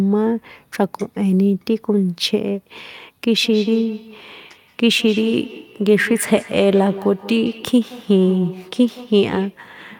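From 3.41 to 9.64 s, each word returns about every 150 ms, thinner and ringing, peaking about 15 dB below speech: feedback echo between two devices sharing one room.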